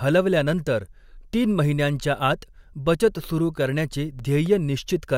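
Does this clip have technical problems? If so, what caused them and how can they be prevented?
Yes. From 3.92 to 4.46 s, just after "महिन्यांच्या आत बचत सुरू", three CD scratch ticks occur, each a short click or micro-dropout, the longest only a few milliseconds. They recur at a steady spacing because a scratch or blemish on the disc passes the laser once per revolution, corrupting more data than error correction can rebuild. The player then interpolates across or mutes those samples, leaving the brief periodic ticks. To prevent this, rip from a clean, undamaged disc using secure, verified extraction that re-reads and flags uncorrectable sectors.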